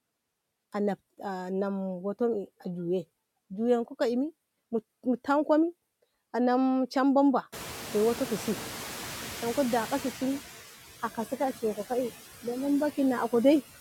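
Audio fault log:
Throughout, noise suppressor artifacts: the suppressor pulls steady noise down by about 13 dB frame by frame, so the background dips in the gaps and swells back under the speech.
7.52–10.41 s, noise suppressor catching up: the room noise jumps by about 23 dB at around seven and a half seconds, and the suppressor's noise estimate trails it. For about 2.9 s only about 9 dB comes off, so the louder noise pushes through before it settles and sinks again; after the jump the room noise sits about 14 dB below the speech.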